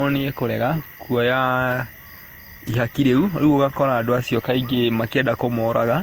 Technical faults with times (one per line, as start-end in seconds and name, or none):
0.00-6.02 generation loss